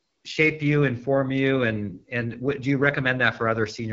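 From start to finish the speech passes through the AMR wideband (HD Voice) codec, and the damage is plainly audible: a rough, raspy grain, which fits its 8.85 kbit/s mode. Unlike narrowband telephone coding, sibilance survives, but nothing lies above 7.6 kHz, and the top band is hiss-like filler.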